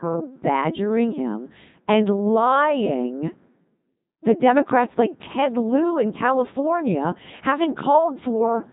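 Speech, passed through a Codec 2 vocoder throughout. It sounds robotic and buzzy, and nothing survives above 3.8 kHz. The heavy damage fits roughly 2.4 kbit/s resynthesis.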